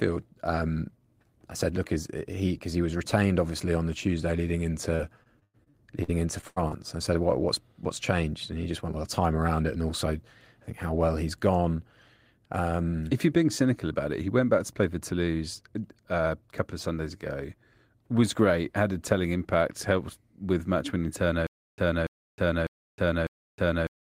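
Repeated packet loss (robotic sound) from 4.95 to 6.73 s: a rapid run of dropouts, each patched by stretching the previous sound, none longer than about 100 ms, leaving choppy speech with pieces missing.

Stutter with silent gaps from 21.47 s to the end: a 287 ms fragment repeats four times every 0.6 s with 313 ms of digital silence between, likely a stalled stream.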